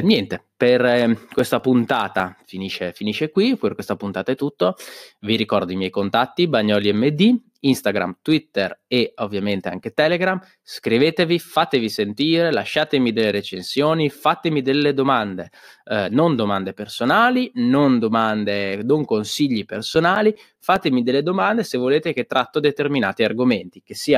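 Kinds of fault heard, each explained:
CD scratch ticks: A blemish on the disc destroys more data than error correction can restore, once per revolution, so the player patches or mutes those samples. Here it comes in two short bursts. The first runs from 0.99 to 2.40 s, after "niente per", with eight ticks at about six a second. The second runs from 19.75 to 20.76 s, after "non domande non consigli", with six ticks. Each tick lasts only a few milliseconds.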